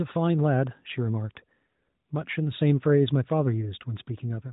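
No technical faults can be heard anywhere in this speech clip.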